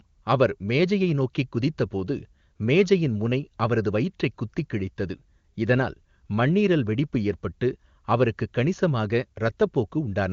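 A speech recording, carried over an AMR wideband (HD Voice) link at a high rate, with no technical fault to point to.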